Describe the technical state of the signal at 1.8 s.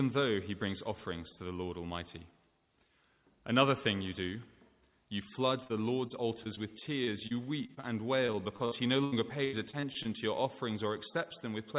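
At 1.8 s the signal is intact, with no dropout, click or glitch, only the steady telephone-band sound of the call path, which has nothing above 4 kHz, consistent with a narrowband G.711-type codec.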